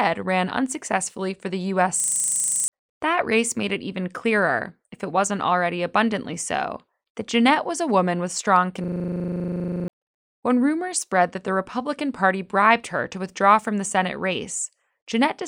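Speech twice freezes into a rapid 25 Hz machine-gun stutter, from 2.0 to 2.68 s and from 8.84 to 9.88 s, with roughly 1.7 seconds of speech lost in total. This is a system hang loop: the system stalled while the audio hardware kept replaying one 40 ms ring buffer.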